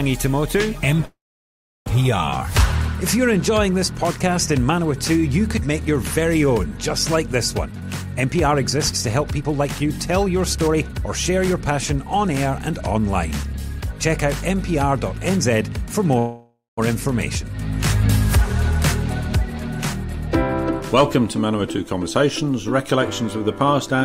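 From 1.05 to 1.88 s a call audio freeze inserts about 0.8 s: a short fading fill, then about 0.7 s of silence, before the sound resumes with nothing lost, likely from stalled packets draining the jitter buffer. From 7.66 to 15.74 s a jitter buffer speed-up trims pitch-period slices to run at 110% speed, removing about 0.7 s and sounding hurried at unchanged pitch. At 16.19 to 16.79 s a second freeze adds 0.59 s, mostly fading fill ending in 0.17 s of silence. From 20.80 to 24.02 s a milder speed-up runs at 105%, removing about 0.15 s.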